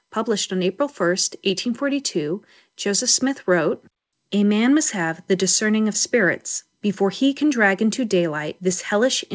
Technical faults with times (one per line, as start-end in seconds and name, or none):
none